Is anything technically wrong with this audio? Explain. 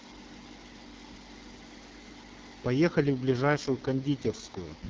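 Yes. At 3.02 s an AMR rate drop sets in and lasts to the end of the clip at 4.90 s. The speech turns rougher and more synthetic, with no gap and no change in bandwidth. That fits the network switching the AMR-WB codec from 12.65 down to 6.6 kbit/s, with fewer bits left for the speech itself. Before 3.02 s the wideband speech is clear, with only light codec coloring.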